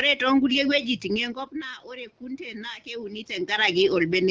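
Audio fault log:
1.11–3.56 s, automatic gain rising: input dropped about 16 dB, so the gain control slowly lifted by about 5 dB, swelling voice and room noise together.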